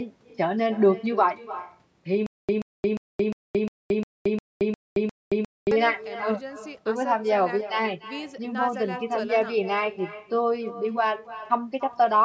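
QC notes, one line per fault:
Throughout: echo with no canceller. Every phrase is trailed roughly a third of a second later by a fainter, thinner copy, sitting about 16 dB below the direct sound. The far end is playing the call through a loudspeaker, and its microphone catches that playback and sends it back over the network. Nothing on that side subtracts it, so the round trip is heard as a constant shadow behind the talker.
2.26 to 5.71 s: stutter with silent gaps. The same 131 ms fragment plays nine times at a steady beat, each repeat followed by about 223 ms of dead digital silence, giving one hit every 354 ms. This is most likely a stalled player or stream that replayed its last chunk of buffered audio on each retry and then ran dry. Whatever should have filled those three and a half seconds is missing.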